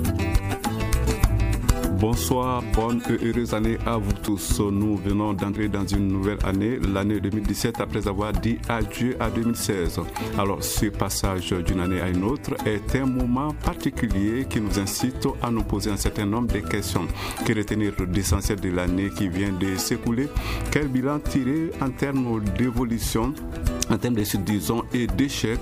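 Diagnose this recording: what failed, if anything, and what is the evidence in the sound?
Small skips forward at 4.28, 5.56 and 24.2 s, the first two losing roughly 40 ms, the last about 70 ms. That's likely a dropped buffer (overrun) at the driver or buffer stage.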